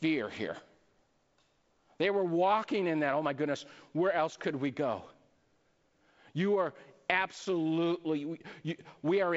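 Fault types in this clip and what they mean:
No faults detected in this clip.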